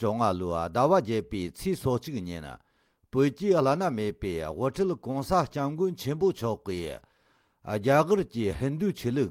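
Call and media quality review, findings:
Nothing stood out on listening to this recording.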